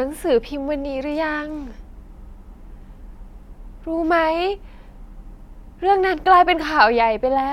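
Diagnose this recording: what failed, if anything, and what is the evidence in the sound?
No fault found in this recording.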